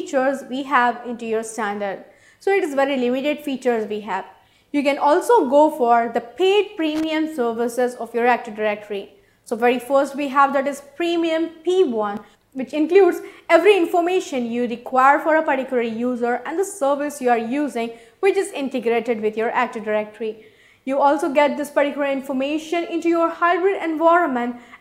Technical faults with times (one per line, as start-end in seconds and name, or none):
6.95-7.04 loose connector crackle